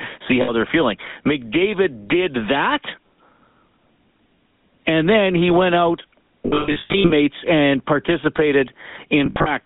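Throughout this speech recording the voice has a buzzy, gravelly roughness, with a narrow band running from about 150 Hz to 3.6 kHz and clearly audible codec damage. That is the sound of the GSM full-rate codec, which fits its 13 kbps rate. It rebuilds speech from a vocal-tract model driven by a sparse, regularly spaced pulse excitation, so the natural fine detail is replaced by that grainy buzz. The audio also breaks into a rough, metallic ring three times, which is the signature of lost GSM frames. The first comes from 0.42 to 0.51 s, just before "they're feeling", and lasts about 60 ms, which fits three missing frames. The longest follows "then he went out", from 6.46 to 7.12 s, with about 480 ms lost across 640 ms and the longest gap around 150 ms. The last runs from 9.26 to 9.51 s, with about 140 ms lost over 200 ms. At each gap the decoder keeps repeating the last good frame's settings, which holds the sound as a metallic tone.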